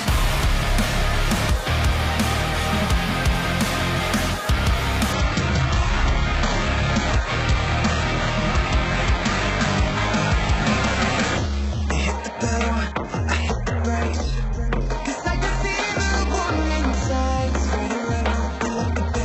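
The adaptive stream switched to a lower bitrate at 5.13 s, with no gap, and stayed there to the end, as the connection slowed. Nothing sounds above 8 kHz, and codec artefacts thicken. The sudden drop points to a shift from a 96 kbit/s AAC-LC stream to a very low-rate HE-AAC one.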